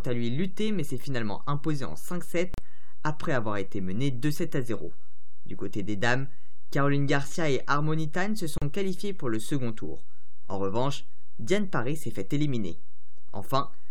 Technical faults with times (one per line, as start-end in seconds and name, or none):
0.00-13.90 DC offset
2.54-2.58 gap at a join of encoded pieces
8.58-8.62 gap at a join of encoded pieces